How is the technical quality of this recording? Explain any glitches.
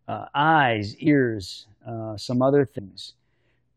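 The recording has two glitches, both compressed frames skipped, at 1.06 s and 2.78 s. At each point the speech jumps forward, losing about 100 ms and then about 150 ms, which fits several whole frames of roughly 23 ms being dropped. Unlike a dropout, there is no silent gap. The audio simply resumes later than it should.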